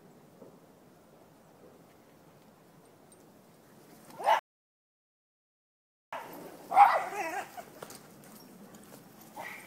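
The audio has a playback stall. At 4.39 s the sound stops in mid-flow and the output goes silent. It stays silent for about 1.73 s, until 6.13 s, then resumes. The likely cause is the player running out of data or its thread being blocked.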